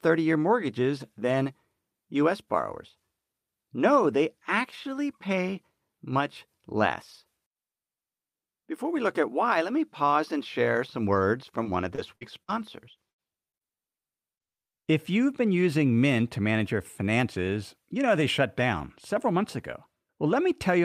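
Repeated packet loss (robotic sound) runs from 11.63 to 12.50 s, starting right after "and share some words". Four separate gaps hit this stretch, the longest 53 ms, with about 160 ms of audio missing in total. Each hole was patched by extending the preceding sound, so roughly a sixth of the span is synthetic fill. The speech turns choppy and mechanical, with fragments dropping out in quick succession.

A burst of packet loss follows at 13.10 to 13.21 s. About 80 ms went missing in one run, and the receiver bridged it with 78 ms of concealment, carrying the last sound forward while fading it down. The result is a held, dimming tail where speech should continue, after which the audio picks up further along with the intervening part gone.

Short concealed packet loss occurs twice, at 13.50 to 13.56 s and 13.57 to 13.77 s. Each time about 40 ms failed to arrive in time, and 30 ms of extrapolated sound, drawn from the pitch or noise character just before, filled the hole before blending back into real audio. 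These are heard as brief smears or wobbles, and a quick consonant may vanish. The second event also adds roughly 20 ms of extra length, slightly stretching that moment.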